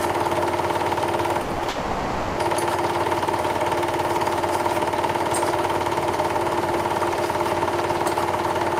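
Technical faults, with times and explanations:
1.41 to 1.51 s and 1.51 to 1.61 s, burst of packet loss: two back-to-back gaps in which the last sound is stretched out and fades, heard as a held buzz or a dying hiss, before the audio picks up again further along. In each, packets were lost or arrived too late, and the receiver filled about 80 ms by extending and lowering what it last had. The same 80 ms of real audio is missing each time, so the sound skips ahead.
1.63 to 1.67 s, short concealed packet loss: a brief smear or wobble right after the bursts, where a short sound can drop out. About 20 ms of audio did not reach the decoder in time. The receiver continued the preceding sound, following its pitch or as shaped noise, then blended back into the real signal. The missing 20 ms is simply skipped.
1.69 to 2.39 s, long network dropout: a long stretch where the sound gives way to a continued buzz or hiss that gradually fades but never reaches silence. 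The audio then returns further on, with the part in between gone. The likely cause is a network dropout: no packets arrived for about 680 ms, and the receiver filled all of it by extending and attenuating the last sound. None of the original audio from that span is heard.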